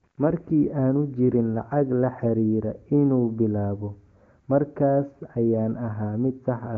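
No technical faults are audible.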